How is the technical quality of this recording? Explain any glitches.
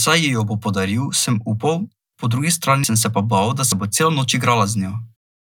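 The speech is interrupted by two abrupt skips. Dropped buffer (overrun) at 2.84 s, right after "po drugi" and before "sem se pa bal", and again at 3.72 s, after "se pa bal da". At each point the sound jumps ahead with no gap, losing roughly 70 ms the first time and about 40 ms the second. The likely cause is samples being overwritten by the hardware before the program read them, so the audio on either side is spliced together directly.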